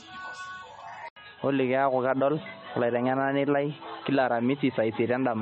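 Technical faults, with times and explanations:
Throughout: low-bitrate audio saved at a high bitrate. The swirly, smeared MP3 artefacts point to a roughly 32 kbit/s original, likely re-encoded at a higher rate that can't restore anything.
1.08–5.42 s: input switched to a poorer device. After an 80 ms gap, nothing above 4 kHz, plus new noise about 40 dB down at similar level, likely a headset or call-profile mic.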